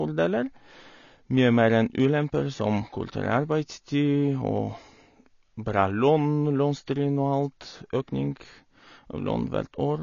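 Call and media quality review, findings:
AAC compression, whole clip. Speech sounds dull and smeared, nothing above 7 kHz, sibilants fizzy and swirly. Likely an AAC-LC encoder starved of bits, damage plainly audible, which fits a low bitrate around 24 kbps. Encoder drops the top band and quantises what's left coarsely, so frame-to-frame warble creeps in. Worth bumping the bitrate on that leg.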